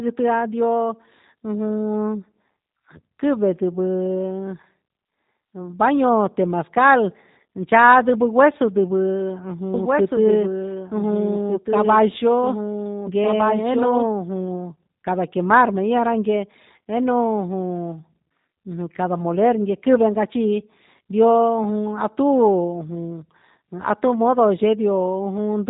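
From start to finish the speech sounds slightly rough and synthetic, with nothing above 3.8 kHz, the plainly audible mark of the G.729 codec at a rate fitting 8 kbit/s. From 9.74 to 14.06 s, a dry, somewhat quieter second copy trails about one and a half seconds behind and cuts in and out abruptly, likely a doubled audio track.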